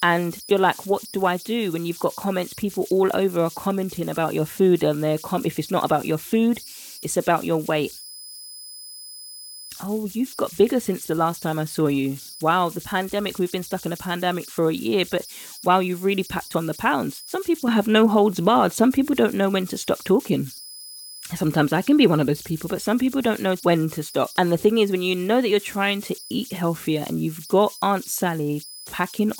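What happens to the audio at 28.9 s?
At 28.9 s the delta-sigma converter, running without dither, is still settling into repeating bit patterns whenever the speech level drops, as it does throughout the clip. These converter idle tones come through as a whistle around 5 kHz, about 20 dB below the speech, with grainy noise beneath quiet passages.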